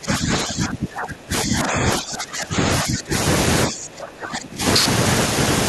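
From 0.0 to 2.65 s, again from 2.83 to 3.14 s, and from 3.67 to 4.62 s, the speech sinks by roughly 20 dB, and by around 25 dB in the last stretch, fading and breaking up. This is speech suppressed in double talk, likely an echo canceller that treated overlapping far-end audio as echo and attenuated everything. On a waveform the envelope collapses in these spans. A spectrogram shows the harmonics and upper bands thinning to faint traces.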